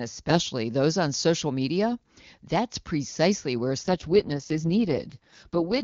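At 3.83 s, right after "precisely where", the link forces an AMR rate drop. The AMR-WB coder gives up most of its speech bits to error protection, and the sound fits a switch from the 23.85 kbit/s mode to the 6.6 kbit/s mode. The band stays the same width and nothing drops out. From that point to the end at 5.83 s the speech turns rough, raspy and synthetic as the vocal-tract model is coded far more coarsely.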